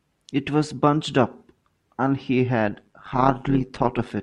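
From 2.67 s to 4.12 s there's overlap-add ripple: the speech was chopped into windowed frames and rejoined with overlaps that don't sum evenly. The level pumps about 11 dB once per frame, around 100 times a second, so it comes across as a metallic, robotic buzz.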